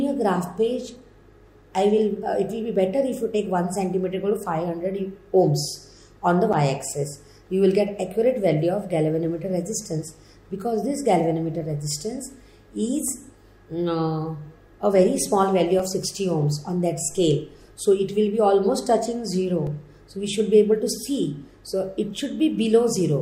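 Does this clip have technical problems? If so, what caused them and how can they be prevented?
Yes, there are three blocks of digital silence, at 6.53 s, 15.79 s and 19.67 s. The sound drops straight to zero and comes back with no fade, so each one is heard as a tick. The first lasts 8 ms and the other two about 2.7 ms each, which fits a 128-sample buffer that the program didn't fill in time. To prevent it, give the audio thread more headroom with a larger buffer or lighter processing so it never misses a deadline.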